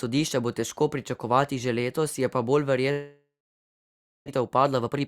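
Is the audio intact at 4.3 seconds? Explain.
No. Just after "letos je pa bolj", sound fades to silence from 2.91 to 4.30 s, likely a long network dropout: packets stopped arriving and about 0.8 s of audio was lost. From 4.31 s to the end, speech runs hurried at unchanged pitch, about 132% speed. This is a jitter buffer speed-up, where pitch-period slices totalling roughly 0.3 s are cut to shed the built-up delay.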